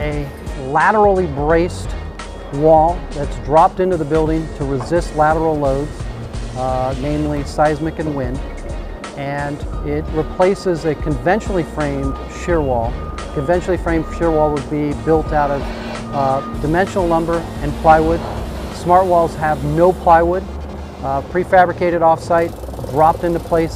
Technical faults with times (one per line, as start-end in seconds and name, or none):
19.00-23.76 resampler restarted on every block